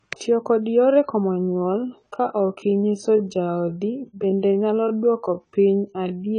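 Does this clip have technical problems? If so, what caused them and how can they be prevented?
Yes. The whole clip has AAC compression damage, and it is plainly audible. Nothing sounds above 10 kHz, so the top of the spectrum is missing. The speech sounds dull and smeared. Sibilants have a fizzy, warbling texture. The likely cause is AAC-LC coding at a low bitrate, and the sound fits roughly 24 kbps. At that rate the encoder lowers its cut-off and starves the upper bands. Encode at a higher bitrate, or keep an uncompressed master for further work.

There is also a time-stretched section. It begins at 1.28 s, right after "kod yore komo", and runs to the end. The pace drops abruptly, to about 0.65 times the original speed, while the pitch stays the same. The slowed speech drags. The likely cause is software lengthening the audio to fit a duration, repeating short pieces to hold the pitch. 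Avoid stretching speech this far, and edit the timing with cuts instead.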